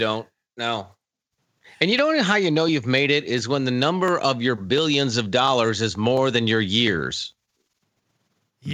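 From 0.59 s to 8.26 s there's a click about every 0.7 s, ten or so in all, over the speech. That steady rhythm points to clock drift buffer slips, likely two clocks around 500 ppm apart, with a block of roughly fifteen samples dropped or repeated each time.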